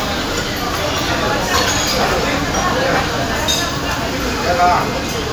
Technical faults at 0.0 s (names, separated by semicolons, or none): none